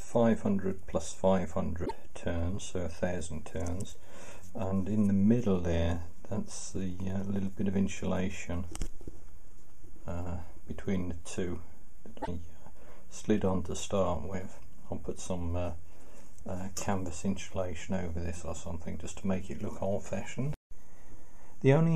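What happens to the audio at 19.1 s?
Nothing goes wrong at 19.1 s; the audio plays through that moment intact, with no dropout, click, glitch or other fault.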